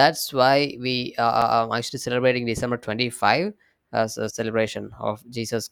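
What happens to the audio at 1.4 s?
At 1.41 s the speech is broken by a brief tick and a near-silent gap of about five milliseconds, after which the sound resumes from a different point rather than continuing smoothly. This is a CD skip. A physical knock or a flaw on the disc threw the laser onto another turn of the spiral track, so the player muted for a moment and carried on playing from a displaced position on the disc.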